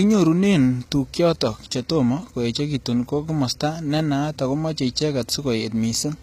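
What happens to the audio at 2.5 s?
At 2.5 s the speech carries the same damage that runs through the whole clip: s sounds come out gritty and metallic, with treble that stays bright but sounds synthetic. This is likely HE-AAC compression, at a bitrate of about 20 kbps. The upper bands are copied up from lower ones, so harmonics don't line up. On a spectrogram, the treble looks smeared and blocky, with nothing above 14.9 kHz.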